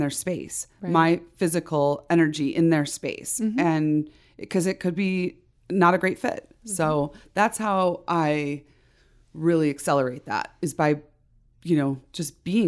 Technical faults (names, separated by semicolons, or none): none